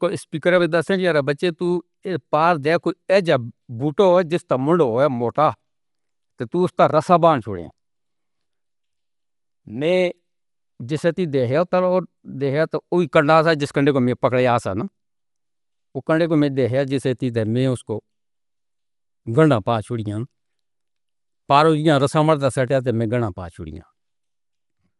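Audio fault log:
Throughout, likely Dolby Digital compression: dull speech, nothing above 11.4 kHz, rough fluttering noise where bit-starved lines are dither-filled rather than swirly, fitting about 64 kbps.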